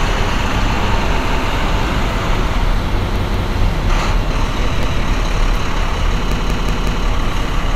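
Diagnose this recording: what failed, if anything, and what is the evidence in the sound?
The failure is at the driver or buffer stage, a repeated buffer. A piece of about 186 ms, which fits an 8192-sample buffer, plays again with a hard join at 1.3 s, twice more at 3.16 s to 3.53 s, once more at 4.83 s, and four more times from 6.32 s to 7.06 s. Fresh audio arrived late, so the device replayed the last block. Unlike a dropout, there is no silent gap, and the sound resumes where it left off.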